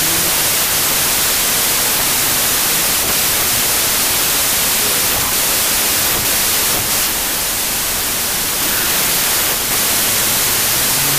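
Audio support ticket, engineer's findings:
Wrong sample width, entire clip. Loud broadband hiss with speech buried underneath, slowed to about 0.667x with pitch dropped to match. Decoder or reader stage likely reading packed 24-bit data as 16-bit words, so words straddle sample boundaries. Spectrogram: near-uniform noise floor masking faint, downward-shifted speech harmonics. Waveform: dense fuzz.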